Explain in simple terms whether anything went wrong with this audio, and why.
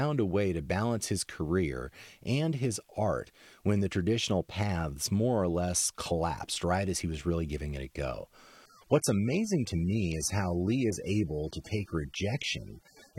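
Something did go wrong: from 8.66 s, right after "giving it a go", the stream switched to a lower-bitrate version, an adaptive stream at a lower bitrate, because the connection slowed. The sound turns duller and smeary, with nothing above 16.5 kHz, through to the end. There's no gap at the switch.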